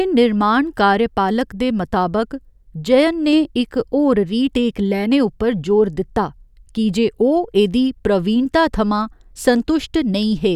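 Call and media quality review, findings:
No faults found in the speech signal; level, continuity and timing show nothing that needs action.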